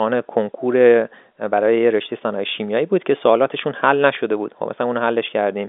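No technical faults can be heard in this speech recording. It has the narrow sound of a G.711 telephone line, with the band running from about 300 Hz to 3.6 kHz and nothing above 3.8 kHz, and only faint coding damage.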